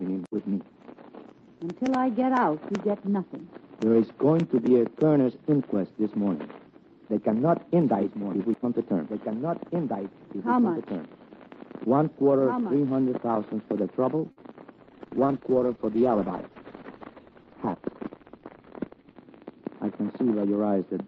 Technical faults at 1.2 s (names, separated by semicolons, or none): none